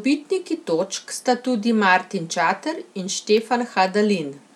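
Stalls of the USB bus or driver every 0.5 s cause periodic USB or driver dropouts in this speech from 3.38 to 4.37 s: about three sub-millisecond silent gaps, heard as regular ticks.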